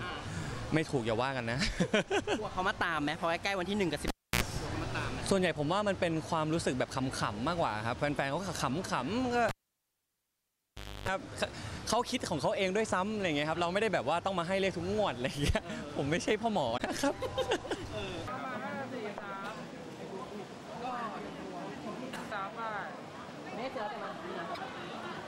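At 4.08 s and again at 9.49 s there's a cable pulled and plugged in. You hear a pop and near silence for about 0.3 s, then about 1.55 s the second time. While only the tip touches there's a burst of mains buzz, 73 ms at 60 Hz the first time and 293 ms at 50 Hz the second. A second pop brings the sound back at 4.43 s and 11.08 s.

Later, at 16.77 s and 24.54 s, there are short glitches of roughly 40 ms where the audio jumps ahead. That's likely a broken MP3 bit reservoir. The frames after a cut reached back for borrowed data and decoded stray bytes from another frame, and the timing fits 24 ms frames.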